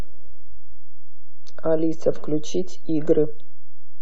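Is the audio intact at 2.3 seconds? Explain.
No. A DC offset of about -16 dBFS runs through the whole clip, pushing the waveform off zero; unlike audible low hum, it is silent, showing only as 0 Hz energy and lost headroom.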